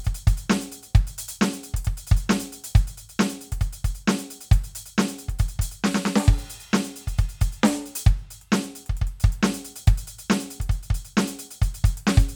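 No faults can be heard.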